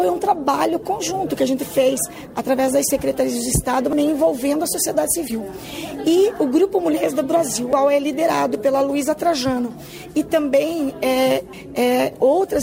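A short squeaky chirp of misplaced energy cuts through the sound from 0.31 to 0.34 s, and a second one from 5.27 to 5.32 s. Each is a corrupt frame decoded: flipped bits in a compressed frame led the decoder to misread gains or codes. It still played the damage, so energy lands at the wrong frequencies for a couple of frames' worth of time in each case.

At 7.73 s and again at 11.53 s the sound jumps abruptly forward, with the two sides butted together and no silence between them. About a fifth of a second is gone at each point. This is likely audio missing between chunks: the recorder or processor, working in 4-second chunks, drops a short stretch each time it closes one chunk and opens the next.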